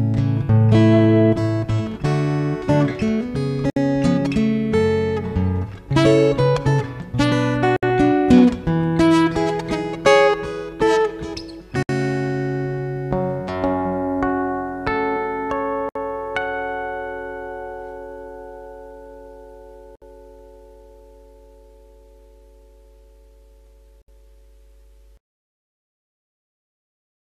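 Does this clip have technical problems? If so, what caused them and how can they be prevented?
Yes. There is a gap at a join of encoded pieces, repeating at 3.70, 7.76, 11.83, 15.89, 19.95 and 24.02 s, each a gap of about 64 ms with smeared edges, after which the sound resumes where it stopped. The audio was encoded as separate pieces of roughly 4 s and joined untrimmed, so each piece's encoder start-up delay and final-frame padding remain as silence. To prevent this, encode the audio as one continuous stream.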